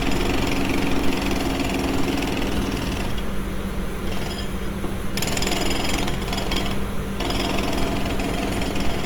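From the start and throughout, the sound is rough and grainy rather than swirling, with content reaching up to about 20 kHz. This is likely Opus compression in its music (CELT) mode, where sparse bits get filled with folded or noisy energy, which fits a rate near 24 kbps.

At 0.99 s there is a single abrupt skip of roughly 20 ms, with the two sides butted together and no gap of silence. That points to audio missing between chunks, as when a recorder loses a sliver while switching buffers. The missing time sets it apart from a dropout, which would leave silence in its place.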